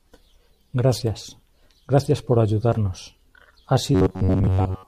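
From 3.95 s to the end, the speech turns into robotic sound from repeated short buffers. A rigid metallic buzz near 94 Hz forms. Most audio is likely repeated, not new.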